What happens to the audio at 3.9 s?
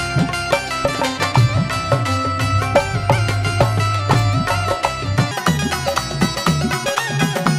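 Nothing goes wrong at 3.9 s; the audio plays through that moment intact, with no dropout, click, glitch or other audible fault.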